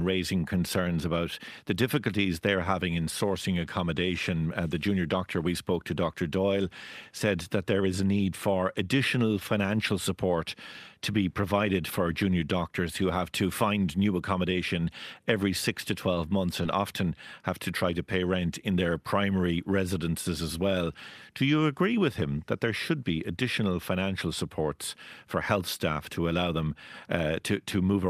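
At 16.63 s, short concealed packet loss: about 10 ms of speech arrived too late, and the receiver extrapolated 8 ms to bridge it, leaving a brief smear.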